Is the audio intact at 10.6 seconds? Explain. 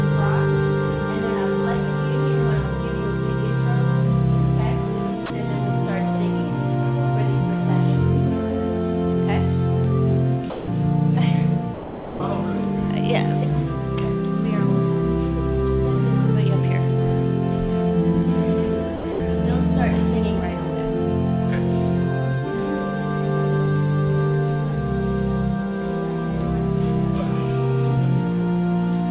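No. From 10.5 to 10.68 s, 180 ms of sound gives way to steady comfort noise, likely sound dropped by the voice detector, which treated the sound as background and stopped sending.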